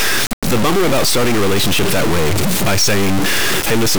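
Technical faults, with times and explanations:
Throughout, stuck bit: the speech carries a harsh, buzzy distortion over its entire length, and the gaps between phrases are filled with noise instead of falling silent. The likely cause is one data bit held at a fixed value by a faulty line or converter, so about half the samples are pushed off by that bit's weight. The error step sits near about -10 dBFS, a high bit, which makes the distortion coarse and the noise in the pauses loud.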